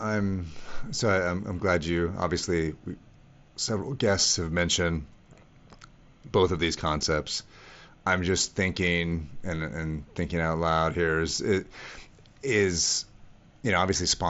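No technical faults detected.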